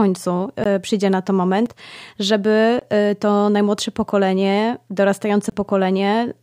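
There are four blocks of digital silence, most likely where the output buffer wasn't filled in time: at 0.64 s just before "przyjdzie na to", at 1.66 s right after it, at 2.79 to 2.82 s before "e to najmłodsze pokolenie", and at 5.50 to 5.52 s. The two 23 ms ones fit a 1024-sample buffer. They come through as short dropouts, and the 6 ms one sounds more like a tick.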